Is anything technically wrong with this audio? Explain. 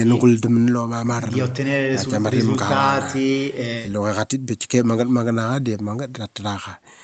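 No, nothing stood out as technically wrong on listening to this speech.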